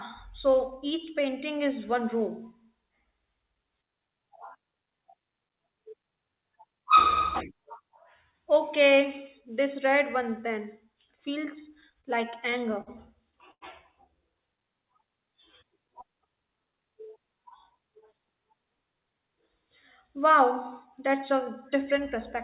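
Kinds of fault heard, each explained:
Repeated stalls (stutter): from 11.81 to 12.90 s, late-arriving packets drained the jitter buffer ten times, each gap patched by extending the last sound, so the speech drags and stutters.
Short stall from a late packet: at 13.51 to 13.64 s, one tardy packet left the buffer empty, and the receiver held the preceding sound for about 98 ms before resuming.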